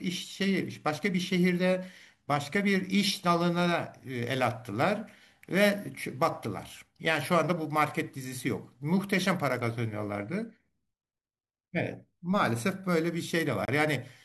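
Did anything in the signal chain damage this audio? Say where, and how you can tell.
Yes. A gap between stream segments opens at 13.65 s and lasts to 13.68 s, a hard-edged hole of about 28 ms in the speech. The fault sits at the streaming or playback stage. The time stamps of two adjacent segments, about 4 s long, don't meet exactly, so the player inserts silence to cover the missing stretch. The abrupt on and off edges and the clean silence point to padding rather than dropped content, and no audio is lost.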